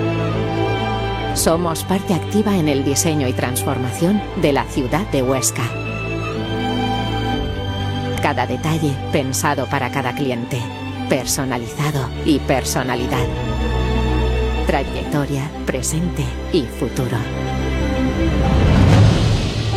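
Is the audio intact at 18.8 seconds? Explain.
No. Frames out of order disrupt the audio from 18.75 to 18.89 s. Two adjacent blocks, each about 70 ms long (which fits a run of roughly three codec frames apiece), were received in swapped order and decoded as they arrived, so this short stretch plays its second half before its first. It comes across as a brief garbled flutter. Nothing is missing; the timing stays intact.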